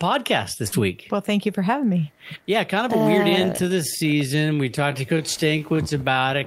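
At 0.67 s there is a brief smear lasting to about 0.74 s, a wobble where the sound seems to hang on itself before blending back. This is short concealed packet loss: roughly 40 ms of the call arrived too late for the decoder, and the receiver covered the gap with about 44 ms of synthesised continuation, extending the pitch and texture of the speech just before the hole, then crossfading back into the real signal.

From 3.25 s to the end of the clip the pace abruptly drops to about 71 percent of its earlier rate, yet the pitch stays where it was. The speech turns drawn out and drags. This is a time-stretched section, likely the result of software lengthening the audio by repeating short overlapping slices rather than resampling it, which would have lowered the pitch.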